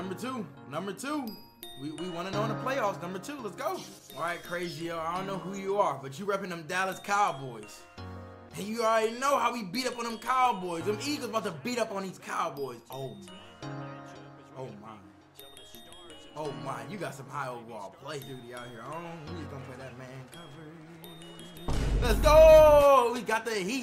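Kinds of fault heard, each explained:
No technical faults can be heard anywhere in this audio.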